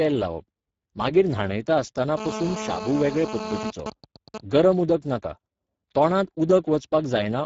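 Speex codec damage runs throughout: the speech has plainly audible noisy, hoarse coarseness, which fits a low bitrate around 10 kbps, and nothing is present above 7.7 kHz. GSM phone buzz appears from 2.17 to 3.71 s: a nearby 2G phone on a call transmits bursts 217 times a second, and the audio circuit rectifies them into a hard, raspy 217 Hz buzz about 9 dB below the speech. GSM signalling bursts follow from 3.80 to 4.52 s: with the phone's user silent, only short groups of radio bursts are sent, heard as even ticks with a longer 217 Hz buzz twice a second, roughly 10 dB below the speech.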